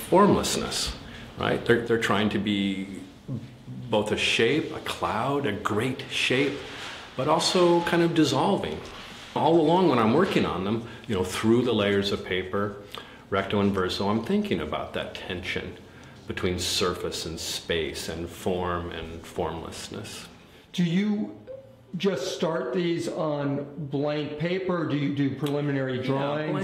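From 1.88 s to the end, the sound abruptly drops by about 6 dB, likely from one channel dropping out before the mono sum.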